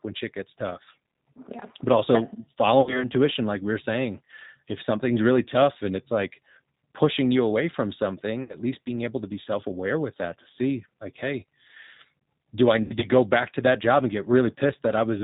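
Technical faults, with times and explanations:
Throughout, G.729 codec: the speech is rebuilt from filter, pitch and pulse parameters, sounding rough and synthetic, consistent with 8 kbit/s. The spectrogram is empty above 4 kHz.
2.81–3.10 s, 8.43–8.56 s, 12.82–13.08 s, VoIP packet loss concealed by the speech codec: 60, 60 and 100 ms were lost, the last scattered over 200 ms. Each gap is extrapolated into a fading buzz or coloured noise, which shows as smeared, repeated harmonics and a sagging waveform envelope.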